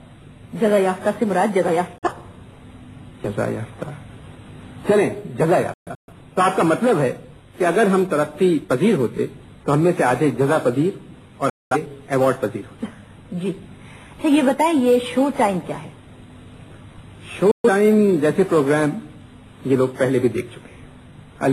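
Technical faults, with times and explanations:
1.98 s, 5.74 s, 11.50 s and 17.51 s: digital broadcast dropout. The receiver lost frames it couldn't decode and muted, fading out within about 3 ms, until good frames resumed. The gaps total about 43 ms, 256 ms, 213 ms and 128 ms, steps that fit whole frames of roughly 43 ms each. At 5.74 s the loss is broken into several short holes across about 341 ms, the longest 128 ms. Whatever was broadcast during each gap is gone.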